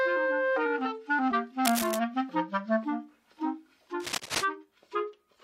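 Twice you get a burst of cable scratch noise: first from about 1.65 to 1.99 s, then again from 4.00 to 4.45 s. Both times a dense, uneven crackle rides over the sound, sitting only a little below it in level. The likely cause is a worn cable, connector or control carrying DC being moved, so its contact resistance jumps around rapidly and throws those ragged scratchy bursts into the signal.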